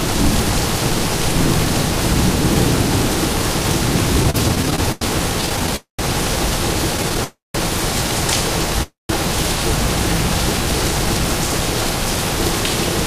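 From 4.23 to 5.74 s the sound hits repeated stalls (stutter): sixteen short holds, the longest 92 ms, fill about a fifth of that span as packets arrive too slowly for playback. Nothing is lost, but the sound drags and judders. On a spectrogram this appears as a string of smeared vertical bands repeating the preceding frame. A shorter run at 6.97 to 7.20 s has five holds of up to 11 ms.

Call audio freezes follow at 5.76 s (226 ms), 7.24 s (302 ms) and 8.83 s (266 ms). Each is a buzz or hiss continuing the last sound that fades to silence for 130 to 180 ms before playback resumes where it stopped. The likely cause is held-up packets draining the jitter buffer. On a waveform each freeze shows as a decaying tail into a flat gap.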